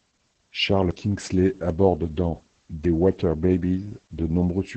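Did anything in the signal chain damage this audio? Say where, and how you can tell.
Yes, at the codec stage. It's Opus voice compression, and it's heavy throughout. Nothing gets through above 8.7 kHz, and the speech comes out muffled, hoarse and a bit robotic. That points to the SILK linear-prediction coder starved at around 10 kbps, coding the excitation coarsely.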